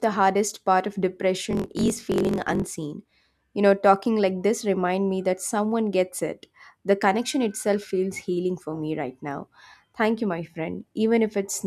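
A block size mismatch (truncated) in this speech clip, from 1.49 to 2.71 s just after "hardest part of", drops the tail of each block, consistent with 1024-sample blocks read short. The result is a 45.9 Hz buzz and speech running about 1.07 times fast.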